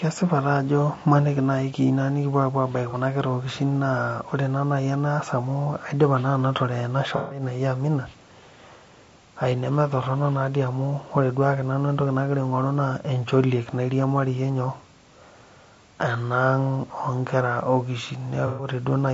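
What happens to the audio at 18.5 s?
From 18.47 to 18.68 s there is AAC frame loss with concealment. About 120 ms of coded audio never reached the decoder, which fits a handful of lost frames. The decoder bridged the hole by reusing the last good spectrum with scrambled or interpolated content. The result is a brief smeared, noisy, phasey patch rather than a clean break. Unlike a plain dropout, the sound doesn't fall to digital silence; it keeps a blurred, ghostly continuation before normal audio resumes.

Underneath this, and across the whole clip, the speech has a rough, grainy texture with noise filling the spaces between harmonics and a thin, synthetic-sounding top band. That is characteristic of low-delay AAC compression, likely AAC-ELD at around 32 kbps. Its short frames resolve voice harmonics poorly at that rate. Because this graininess is steady rather than confined to 18.5 s, it is easy to separate from the localized concealment smear, which briefly worsens an already coarse signal.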